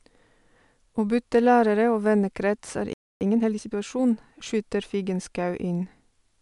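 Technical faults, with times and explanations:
2.93–3.21 s, playback stall: after "og vennekrets er" the speech drops to silence for 0.28 s, likely because the player ran out of buffered data or its output thread was blocked.
3.21–3.75 s, time-compressed catch-up: speech resumes hurried at 1.5 times normal speed with unchanged pitch, as small segments are cut out and cross-faded to clear the backlog.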